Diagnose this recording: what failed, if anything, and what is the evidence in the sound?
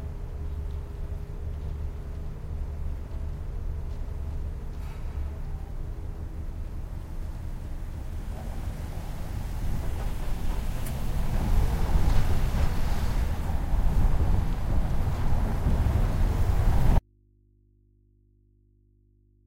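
The signal feed most likely lost its connection in the analogue wiring while the input stage stayed live, leaving an open input that picks up mains hum. This is an audio dropout to a faint residue. At 16.99 s the sound cuts out abruptly, and from there through to the end only a low hum remains, about 40 dB below the earlier level. The break is instant rather than a fade, and the hum shows the chain after the break was still powered and recording.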